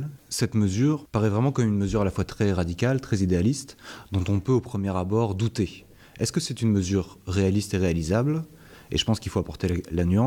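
Nothing stood out as a technical fault on listening.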